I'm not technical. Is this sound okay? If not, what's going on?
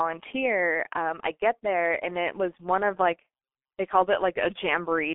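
No. From start to finish, the speech went through a G.723.1 codec, an old internet-phone system that squeezes speech very hard and keeps nothing above about 3.7 kHz. That leaves the voice muffled and rough, with smeared consonants.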